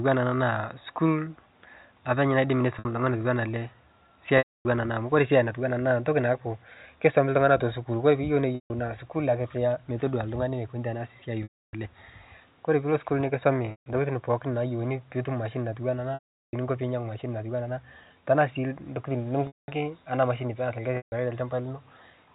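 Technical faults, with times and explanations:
2.79, 4.38, 8.55, 11.43, 13.71, 16.14, 19.47 and 20.97 s: packet loss with pitch repetition. Gaps of 60 to 390 ms are bridged by a repeated pitch period. The 60 ms gap sounds briefly held and buzzy, while longer ones fade to silence before the speech cross-fades back in.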